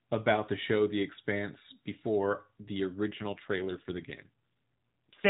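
From 3.12 s, just after "before the", to the end of the clip, an AMR rate drop makes the speech rougher, buzzier and more synthetic, though the band stays the same. The mobile codec switched to a lower rate, consistent with a fall from 12.2 kbps to about 5.9 kbps, leaving fewer bits for the vocal excitation. On a spectrogram the 4 kHz ceiling holds, but harmonics blur and fine detail thins. The waveform shows no gap.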